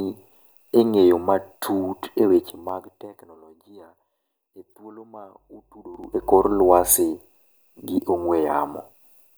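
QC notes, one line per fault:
2.32 to 3.53 s, zipper noise: the level drops by roughly 25 dB, but in audible 2 dB jumps about ten times a second instead of a continuous glide. Each jump is an instant gain change with no smoothing between values, so every step puts a small discontinuity into the waveform. Over the whole fade those discontinuities run together into a fine ticking, zipping texture that sits on top of the speech until the level settles.
5.36 to 6.95 s, mains hum: a steady 50 Hz tone with some low harmonics appears, sitting roughly 20 dB under the speech. Power-line current is leaking into the signal path, most plausibly through a ground loop or induction from a nearby transformer, so a constant low drone sits underneath everything for about a second and a half. It does not change with the speech.
5.85 to 6.32 s, zipper noise: inside the hum section the level rises by roughly 25 dB in coarse 5 dB steps, again about ten per second. 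The larger increments make each click sharper than in the earlier fade, so this short ramp zips more noticeably. The cause is the same unsmoothed stepwise gain update.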